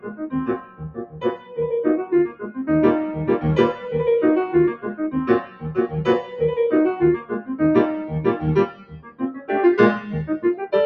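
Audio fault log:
Throughout: noise suppressor applied to music or sounds. A suppressor built for speech stays engaged and keeps mistaking steady, sustained parts of the sound for background noise, so it pulls them down while sharp onsets pass. The level swings by around 10 dB, giving a pumping, fluttering, thinned character. Unlike compressor pumping, the gain dips follow how steady the sound is, not how loud it is.
0.00–0.27 s, 0.58–1.58 s, 2.29–2.50 s, 5.43–5.65 s, 7.18–7.49 s, 8.67–9.49 s: sound cut by the noise suppressor. In these spans the suppressor judges the sound to be noise and cuts it harder than the rest, by about 12 to 14 dB and deepest at about 15 dB in the last span. The longest stretches run about a second and about 0.7 seconds. This is not a dropout. The sound sinks without going silent, while attacks mostly come through.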